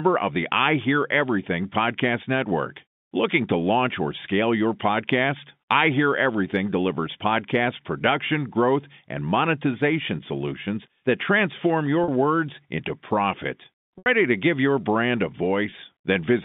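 A brief buzzy hold interrupts the speech at 12.04–12.08 s, after "monetization solutions that transform", at 13.98–14.06 s, after "words into profit", where it fades toward silence, and at 15.70–15.72 s, after "give your brand a". This is packet loss with pitch repetition: 40, 80 and 20 ms of lost audio were bridged by repeating the last pitch period through the narrow telephone band.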